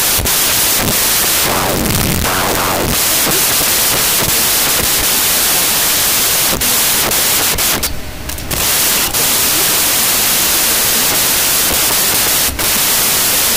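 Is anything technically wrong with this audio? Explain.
Yes. Throughout the clip there is a wrong sample width: 16-bit data read as packed 24-bit. Each three-byte value straddles mismatched samples, producing loud noise with the original buried inside it, playing about 1.5 times too fast and correspondingly higher in pitch.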